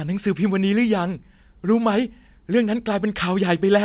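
No technical faults turn up in this speech recording; it has come over a WebRTC call path whose audio stops at 4 kHz, which fits narrowband telephone coding such as 64 kbps G.711 mu-law.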